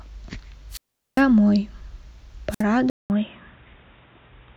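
Wireless microphone squelch dropout occurs first from 0.70 to 1.23 s and again from 2.50 to 2.63 s. Each time, the analogue FM radio link faded far enough that the receiver's squelch closed and muted the output. A rise of hiss gives way to a hole of near silence lasting 0.40 s the first time and 0.06 s the second, before the speech returns.

An input switched to a poorer device is the likely cause of the change at 2.90 s that lasts to the end. A silence of 0.2 s marks the switch. After it the speech turns dull and boxy, with nothing above 3.8 kHz. The level shifts by around 5 dB, and a new background noise sits roughly 40 dB below the speech, the narrower band and different noise of another microphone or a headset's call profile.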